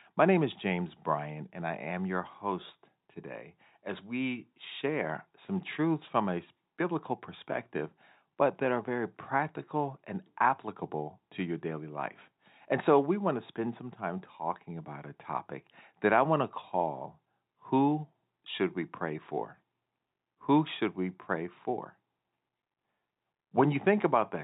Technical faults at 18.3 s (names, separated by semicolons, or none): none